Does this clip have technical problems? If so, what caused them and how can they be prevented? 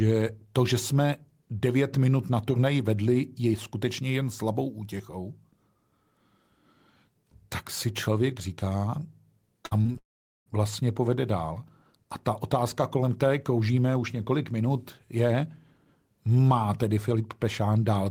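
Yes. From 9.65 to 9.96 s there is repeated packet loss (robotic sound). Four short gaps, the longest 56 ms, are patched by stretching the preceding sound, so about 41% of that span is concealed and the speech turns choppy. A larger jitter buffer with forward error correction would prevent it.

Immediately after, from 9.98 to 10.48 s, roughly half a second of speech is gone. A brief smeared continuation fades into about 430 ms of silence before the audio resumes without the lost part, most likely a long network dropout. A more stable connection, such as wired instead of congested Wi-Fi, would prevent it.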